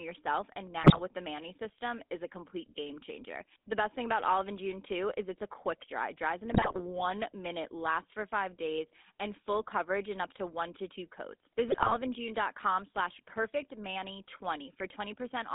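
A speech recording heard through the GSM full-rate codec from start to finish. The band runs only from about 200 Hz to 3.6 kHz. The voice has the buzzy, gravelly texture of this pulse-excited vocoder, which fits a 13 kbps GSM stream. The damage is plainly audible. GSM bit errors break the speech three times: 0.82 to 1.00 s, after "yourself and"; 6.50 to 6.82 s, between "dries in" and "minute lasts for five"; and 11.68 to 11.97 s, after "one to two coats". Each burst turns into squawks and gargling. Corrupted parameters warp the decoded spectrum and level across several frames.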